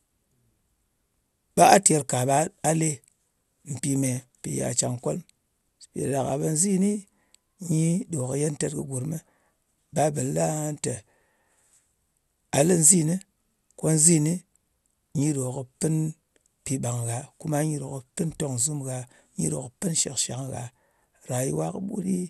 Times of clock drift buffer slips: none

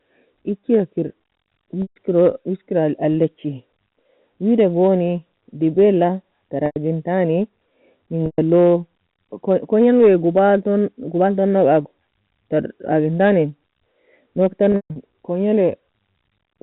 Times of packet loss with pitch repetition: 1.82-1.96, 6.66-6.76, 8.26-8.38, 14.72-14.96

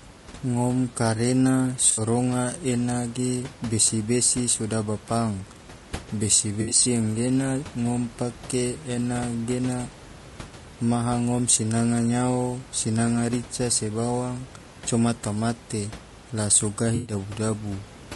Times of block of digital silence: none

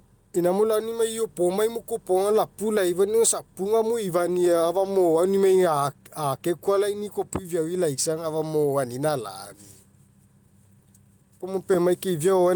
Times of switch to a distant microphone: none

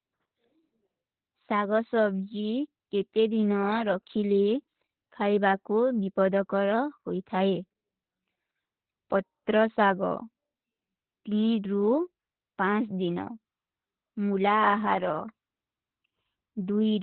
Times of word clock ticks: none

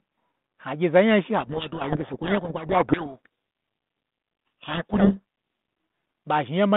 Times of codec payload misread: 1.38-5.20

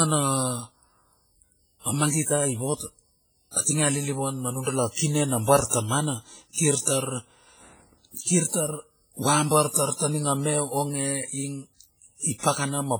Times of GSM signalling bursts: none

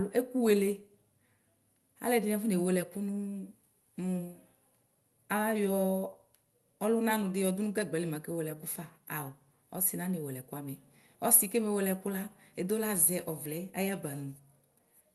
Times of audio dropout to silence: none

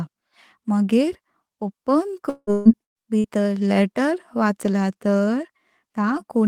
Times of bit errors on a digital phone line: none

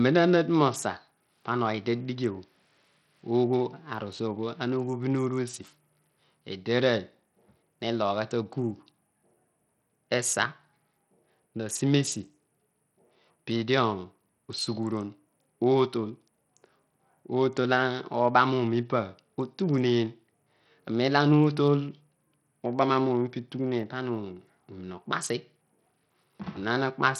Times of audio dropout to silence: none

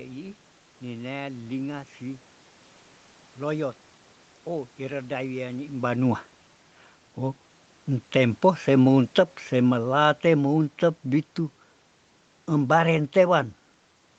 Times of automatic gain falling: 8.69-11.34

